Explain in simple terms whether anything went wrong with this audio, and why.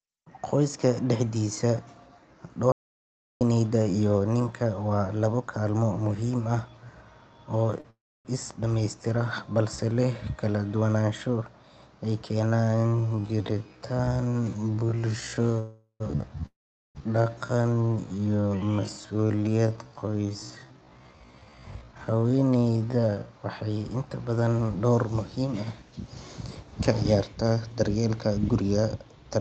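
Several things went wrong in this speech recording.

Audio dropout to silence: between 2.72 and 3.41 s the input was most likely lost for a moment, perhaps through a loose connection or a brief mute. The sound cuts off into dead silence with no background at all, and about 0.69 s of speech is simply gone.

Short stall from a late packet: at 7.80 to 7.86 s one piece of the call arrived late, so the receiving end held the last sound for 40 ms while it waited. That sound drags on slightly, but nothing is lost.

Call audio freeze: at 7.90 to 8.27 s, 15.59 to 16.02 s and 16.46 to 16.97 s, pieces of the call were likely held up in transit. Each time the last sound is stretched into a fading buzz and then goes silent, for 0.29, 0.10 and 0.43 s, before the speech resumes where it stopped. The gaps are added pauses, not missing speech.

Time-stretched section: from 12.44 to 23.29 s, software likely stretched the audio to fill a longer slot, playing it at about 0.54 times normal speed while keeping the pitch. 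The pace suddenly drops to roughly half, and the speech drags.

Jitter buffer speed-up: at 21.74 to 22.39 s and 28.09 to 29.33 s, the call had built up extra delay, so the receiver trimmed tiny slices, roughly a tenth of a second in total each time. The speech runs about 12% and 9% faster at the same pitch and sounds hurried.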